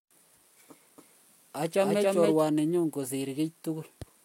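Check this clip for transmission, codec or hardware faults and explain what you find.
One fault is present: a doubled audio track, from 0.98 to 2.40 s. A second copy of the speech trails the original by around 300 ms, at roughly equal loudness. It is likely captured twice through a slower path. The copy is dry and full-band, and it starts and stops abruptly.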